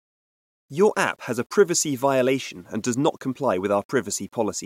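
Throughout the speech there is a grainy, rasping distortion that rises and falls with the signal rather than sitting as a steady hiss. It is most obvious on quiet syllables and decaying word endings, which turn gritty and sputter before dropping to silence. This is low bit depth without dither, likely from rounding to a coarse resolution that fits about 9 bits. The error sits roughly 45 dB below the speech.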